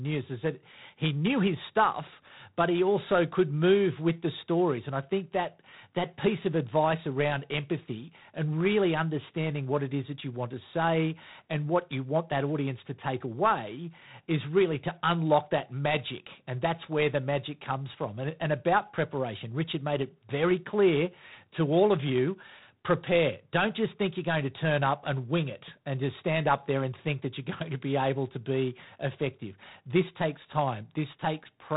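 Throughout this speech clip a harsh, rasping hiss rides on the speech and swells and fades with its level, and nothing reaches above about 3.9 kHz. That is G.726 ADPCM damage: too few bits per sample encode the prediction error, which fits 24 kbit/s operation.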